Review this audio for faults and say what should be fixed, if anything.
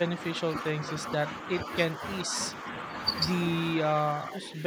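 From 4.2 to 4.63 s the speech level sags by about 5 dB, which is likely speech suppressed in double talk: the echo canceller mistook the talker for loudspeaker echo and attenuated both. Unlike packet-loss dropouts, the sound dips rather than vanishing abruptly. Tuning the canceller's double-talk detector to hold near-end speech while the far end is active would prevent this.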